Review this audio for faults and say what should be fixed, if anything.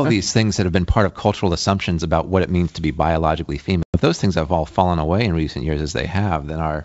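Packet loss on an ADPCM call cuts a hard-edged silent hole from 3.83 to 3.98 s, after "means to be biologically". About 110 ms is gone, which fits roughly ten packets. The decoder's predictor and step size then disagree with the sender's. So "those things have all" re-enters slightly distorted, then settles. Loss concealment that also resynchronises the ADPCM decoder state would prevent this.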